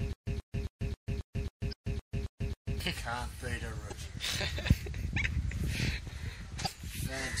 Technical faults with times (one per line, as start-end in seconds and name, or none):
0.00-7.40 MP3 compression
0.00-2.80 stutter with silent gaps
1.69-1.73 damaged data in a compressed stream
3.88-3.93 damaged data in a compressed stream
6.62-6.67 damaged data in a compressed stream